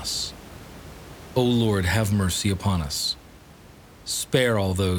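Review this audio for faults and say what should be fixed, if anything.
No faults; nothing needs fixing.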